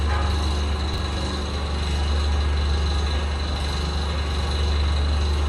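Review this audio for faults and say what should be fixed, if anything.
Chunks out of order at 0.94–0.98 s: a 20 ms chunk plays one chunk late, causing a jumbled moment, with three waveform discontinuities showing as vertical spectrogram lines. Reorder chunks by sequence number or timestamp in a jitter buffer before playback or writing.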